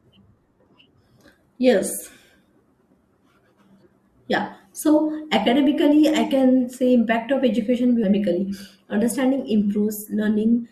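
A speech recording with one stream segment skipped, at 8.03 s. The speech jumps abruptly ahead there, with a small blip at the join. A stretch of the programme is missing. The likely cause is a segment that failed to load, so the player moved on to the next.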